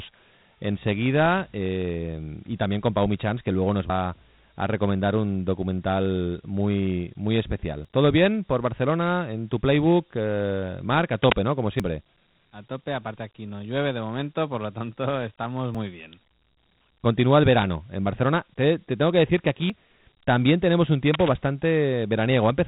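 The clip is speech coded throughout as Dialogic VOX ADPCM. Nothing reaches above 3.9 kHz, and a gritty hiss rides on the voice, which fits 4-bit OKI ADPCM at 8,000 samples a second, or 32 kbps, with plainly audible quantisation damage. Short skips of about 50 ms occur at 3.90, 7.85 (after "un documental muy muy"), 11.80, 15.75 and 19.70 s (between "tengo que decir que" and "también tenemos un"). They are spaced roughly 4 s apart and the sound on either side is butted together with no silence, so this is likely audio missing between chunks, where material is dropped each time the recorder hands over from one block to the next. Cable scratch noise appears from 11.23 to 11.38 s and again from 21.13 to 21.29 s, just after "también tenemos un". Both are dense, ragged bursts at about the level of the speech itself, likely from a worn cable or connector being moved and its contact resistance fluctuating.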